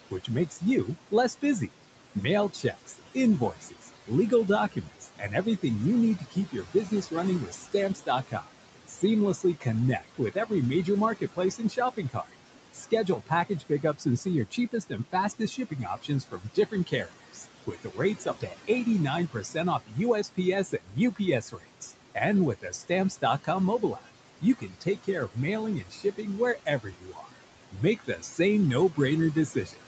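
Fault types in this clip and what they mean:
Noise suppressor artifacts: The suppressor pulls every band it judges to be steady noise down by about 18 dB, frame by frame, so the room noise drops away in pauses and returns under the speech.
Speech cut by the noise suppressor: The suppressor mistakes parts of the speech for noise and turns them down with the background, by up to about 16 dB between 0.11 and 5.64 s (roughly 1.5 s in all), then by up to about 18 dB from 6.19 s onward, swallowing soft consonants and word endings.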